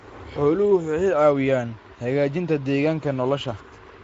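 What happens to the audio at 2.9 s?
At 2.9 s the Speex codec damage heard throughout the clip is present, as it is from start to end. Its CELP coding leaves too few bits for the excitation, so the speech sounds noisy and hoarse, consistent with roughly 16.8 kbps, with nothing above 7.7 kHz.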